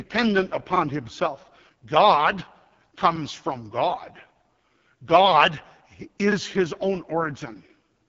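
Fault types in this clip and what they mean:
AMR wideband (HD Voice) codec: The speech sounds rough and raspy throughout, with nothing above about 7.5 kHz. A pulse-driven vocal-tract model is squeezed to a very low rate, which fits AMR-WB's lowest 6.6 kbit/s mode, and the heavy coding damage shows.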